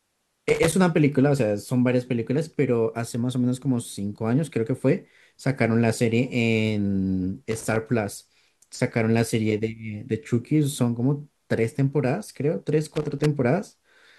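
Loose connector crackle breaks into the speech three times: 0.49 to 0.73 s, 7.51 to 7.76 s, and 12.95 to 13.26 s. Each burst is irregular scratching where a worn contact intermittently opens, chopping the signal.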